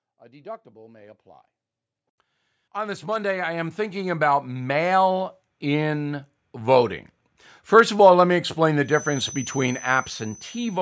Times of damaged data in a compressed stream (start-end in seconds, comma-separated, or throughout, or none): none